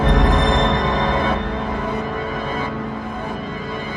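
Nothing in this recording stands out as a technical fault, so there's really nothing here to flag.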